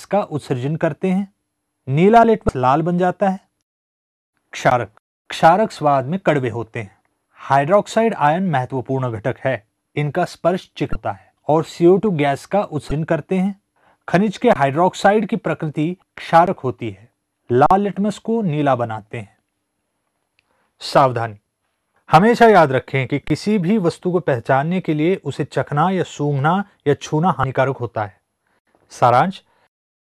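An underrun with held sample first appears at 2.23 s, then at 4.70 s, 14.53–14.56 s, 16.46 s, 17.66–17.71 s and 23.28–23.30 s. Each time the output buffer ran dry and the converter froze on its last value. The sound briefly goes flat and still, rather than chirping, for 7 to 44 ms. The 11.61 ms and 23.22 ms gaps fit a 512- or 1024-sample buffer.

Damaged data in a compressed stream occurs at 2.46 s, 10.92 s, 12.88 s, 15.99 s and 27.41 s. Each is a roughly 33 ms chirp, squawk, click or short hole where the decoder lost frame sync. Unlike the flat underruns, these come from the decoder misreading frames and searching for the next frame header.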